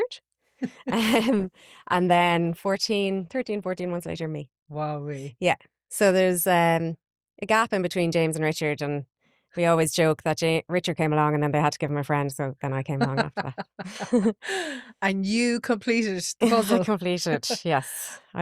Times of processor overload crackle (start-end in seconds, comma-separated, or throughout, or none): none